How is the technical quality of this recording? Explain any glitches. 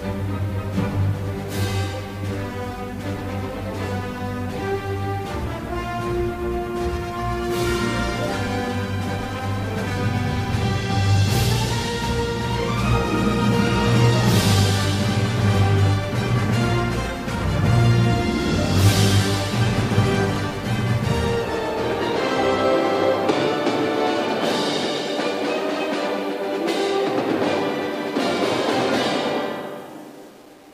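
The technical quality is poor, with one fault heard throughout.

Low bit depth without dither runs through the whole recording, likely from rounding to 8 bits. The error tracks the signal, giving grainy distortion roughly 30 dB below it. The waveform shows stair-stepped levels, and the spectrogram shows signal-following hash instead of a steady noise floor.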